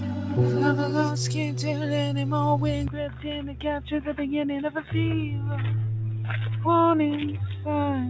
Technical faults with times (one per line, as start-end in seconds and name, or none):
2.88-8.09 input switched to a poorer device